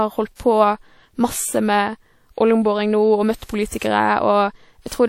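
Throughout the speech the sound has the ringing, washy quality of a transform codec, with a hiss that swells and recedes along with the signal and nothing present above 16.5 kHz. This is likely WMA compression at a low bitrate, around 48 kbps, where the long transform blocks smear quantisation noise over tens of milliseconds and weaker spectral lines are dropped entirely. The codec damage is plainly audible rather than subtle.

Pre-echo appears at 0.35 s, 3.45 s and 3.78 s. Each time a short hiss arrives just ahead of a sharp attack, lasting about 44 ms in the first two cases and 36 ms in the third, and the onset itself sounds softened. The attack sits late in a transform block, so noise scaled to its loudness is spread back across the quiet stretch that precedes it.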